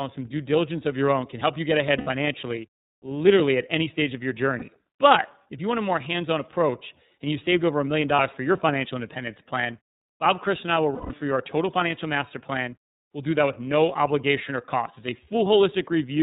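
Throughout, the speech is band-limited below 4 kHz and sounds rough and synthetic, consistent with the iLBC codec at 30 ms frames, which fits 13.33 kbps. Lost iLBC frames at 1.97–2.08 s after "can help you get" (90 ms), 4.58–4.63 s (30 ms), 8.15–8.20 s after "saved over a million" (30 ms), and 10.94–11.11 s after "and I will" (150 ms) are filled with a repeated, buzzy pitch cycle that fades over the longer losses, then recover immediately.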